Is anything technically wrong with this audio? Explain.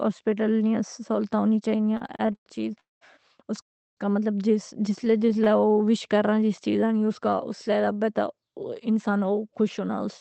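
Yes, there are a few network-type glitches here, all in the first nine seconds.

From 1.71 to 2.48 s, right after "نیاں سہولتاں ہونی", there are repeated stalls (stutter). Packets kept arriving late, so the jitter buffer kept running dry and the receiver stretched the last sound across 11 little gaps, the longest 108 ms. Nothing's lost, but it drags and hiccups. A lighter burst of the same thing runs from 5.05 to 5.77 s, with 12 tiny gaps of 22 ms at most.

There are two call audio freezes. The first runs 2.80 to 3.03 s, just before "اس کا", and the second 3.61 to 3.99 s, after "چیز اس". Each one is a brief smeared buzz or hiss fading to silence for most of its length, roughly 180 ms and 340 ms. The likely cause is packets held up in transit until the buffer emptied. The audio then picks up where it left off, so a pause gets inserted rather than anything being cut.

From 5.03 to 8.04 s there's a jitter buffer slow-down. 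The receiver was rebuilding its reserve by repeating single pitch periods and bits of pause, adding 264 ms in total. The speech plays at about 91% speed at the same pitch, so sounds come out drawn-out.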